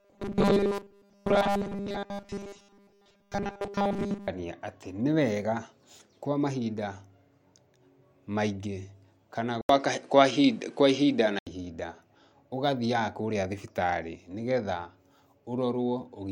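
From 0.01 to 4.28 s the speech shows robotic sound from repeated short buffers. A rigid, metallic buzz at 200 Hz fits a 5 ms fragment replayed over most of the stretch, likely because new audio arrived too seldom. Unlike flanging, its pitch stays fixed rather than sweeping.

At 9.61 s an 80 ms silence marks an input switched to a poorer device, likely another microphone or headset profile. Until 11.47 s the band narrows, the level shifts by about 5 dB, and a faint new noise floor appears, which a simple filter would not add.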